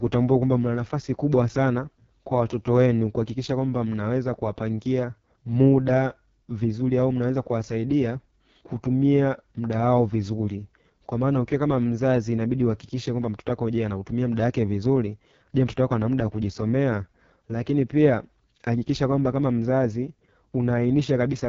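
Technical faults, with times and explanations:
Throughout, AMR wideband (HD Voice) codec: the speech sounds rough, raspy and buzzy, with nothing above 7.1 kHz and a hissy top band. The coder rebuilds speech from pulses through a vocal tract model with very few bits, which fits its lowest rate, 6.6 kbit/s.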